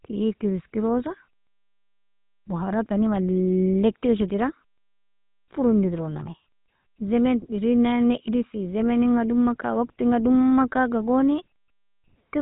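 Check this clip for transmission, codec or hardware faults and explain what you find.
The speech runs through the GSM full-rate codec throughout. Nothing above 3.8 kHz survives. The sparse pulse excitation makes the voice plainly buzzy and gravelly, which fits a 13 kbps rate.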